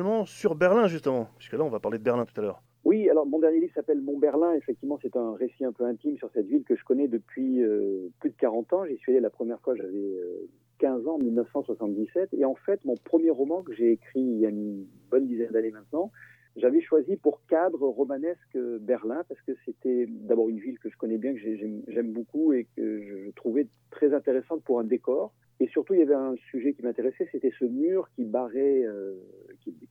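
At 9.78 to 9.83 s and again at 21.91 to 21.95 s, the audio has frames out of order. Two adjacent blocks of about 23 ms each, consistent with 1024-sample frames at 44.1 kHz, play in swapped order. Each spot gives a brief garbled flutter, and no time is lost. A spectrogram shows a short slice whose two halves are transposed.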